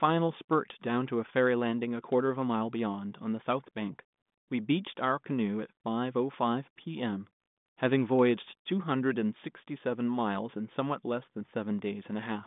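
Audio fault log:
No audible faults in this clip.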